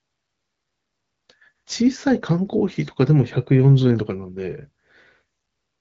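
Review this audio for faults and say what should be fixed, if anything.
Nothing needs fixing: the speech arrives intact through what sounds like an AMR wideband (HD Voice) path at one of its higher rates, with the band topping out near 7.5 kHz and no coding damage that calls for action.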